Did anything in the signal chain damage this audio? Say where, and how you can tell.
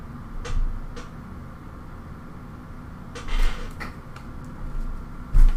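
Yes: a repeated buffer at 3.99 s, at the driver or buffer stage. A piece of sound about 1.33 ms long plays twice with a hard join, heard as a click or brief buzz, which fits a 64-sample buffer replayed once when new audio arrived late. Essentially nothing is lost.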